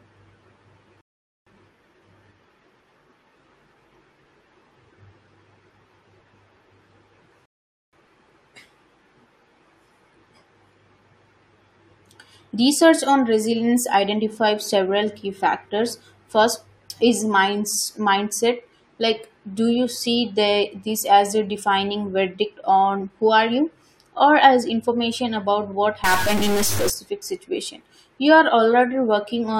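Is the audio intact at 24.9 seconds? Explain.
Yes, the audio at 24.9 seconds is intact, with no dropout, click, distortion or other fault audible at that moment.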